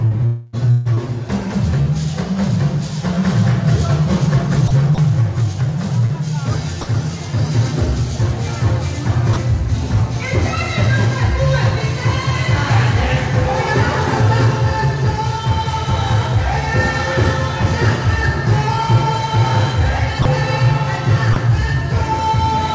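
Sound chopped by the voice detector appears from 0.08 to 1.09 s and again from 4.68 to 4.98 s. Nearly half a second of the first stretch and about 60 ms of the second are replaced. The likely cause is a sender-side voice detector toggling transmission on and off, with the receiver filling each gap with comfort noise. Short concealed packet loss is heard at 1.82 to 1.89 s and 6.06 to 6.12 s, each a brief smear where 30 ms of audio never arrived in time. The receiver stretched the preceding sound forward for roughly 35 ms before blending back into the real signal. Sound dropped by the voice detector occurs at 6.81 to 6.87 s (60 ms), and at 9.33 to 9.36 s, 20.22 to 20.25 s and 21.33 to 21.36 s (30 ms each). At each of these points the sound briefly gives way to steady comfort noise and then resumes. The likely cause is the detector mistaking quieter material for background and halting transmission until it triggered again. 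All of this comes through a call path whose bandwidth stops at 8 kHz, which fits G.722 at 64 kbps.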